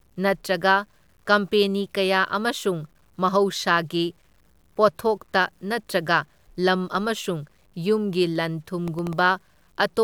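From start to finish, the speech has likely been cut to too few bits by truncation without dither, which fits about 10-bit audio. The rounding error tracks the signal, sitting roughly 40 dB below it, so quieter syllables and decays sound grainy, with a gritty edge that shifts with the speech.

From 8.88 to 9.19 s, processor overload crackle appears: the processor falls behind and misses a handful of deadlines for very short buffers, well under a millisecond each. Each miss replays a scrap of old audio with hard edges, producing a short burst of crackling, tearing grit over the speech.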